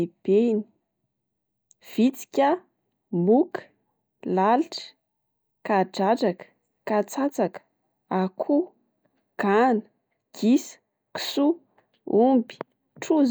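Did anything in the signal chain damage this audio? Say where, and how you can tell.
No, nothing in this speech stood out on listening as damage from any stage of the signal chain.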